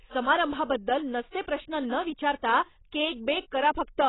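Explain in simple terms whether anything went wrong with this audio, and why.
Throughout the speech, the sound is dull and muffled, with nothing above about 3.9 kHz, and the s and sh sounds turn smeared and fizzy rather than crisp. That points to heavy AAC compression, most likely a low-quality AAC-LC encode squeezed hard to save space. Plain muffling from a simple treble cut would sound soft but clean. Here the remaining sound also warbles and fizzes, the sign of a codec discarding detail.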